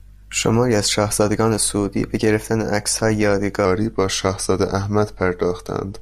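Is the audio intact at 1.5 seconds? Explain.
Yes, the speech at 1.5 s plays through cleanly, with no dropout, click, distortion or other technical fault at that point.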